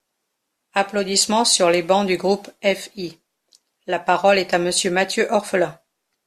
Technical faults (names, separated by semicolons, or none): none